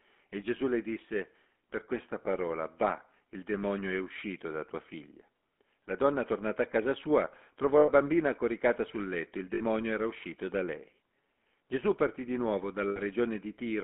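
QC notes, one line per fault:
Throughout, GSM full-rate codec: the speech has the plainly audible buzzy, gravelly roughness of this coder, which rebuilds the voice from a vocal-tract filter excited by sparse, evenly spaced pulses instead of the real waveform. The thinned excitation causes the grain, and the band is narrowed to roughly 200 Hz to 3.5 kHz, so the sound is dull and boxy. The coarseness fits a 13 kbps GSM link.
7.78–7.9 s, 9.54–9.62 s and 12.88–12.99 s, lost GSM frames: three short dropouts of about 100 ms, 60 ms and 80 ms, where the decoder repeats the last good frame and produces a brief rough, metallic ring instead of speech. The first falls after "a casa sua trovò" and before "bambina coricata sul letto", the second after "coricata sul letto il" and before "era uscito da lei", and the third after "partì di nuovo".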